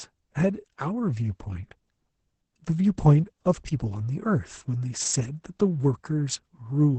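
From start to finish, the speech carries heavy Opus voice compression. The top end stops at about 8 kHz, so sibilants lose their edge and the sound is muffled. The voice is hoarse and faintly robotic. That comes from the SILK linear-prediction coder spending very few bits on the excitation. The coarseness points to a bitrate near 10 kbps, with the coder running in its wideband voice mode.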